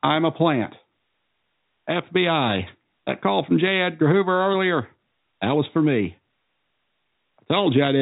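No technical faults can be heard in this speech; the sound carries the narrow band of G.711 telephone coding, with nothing above about 3.8 kHz.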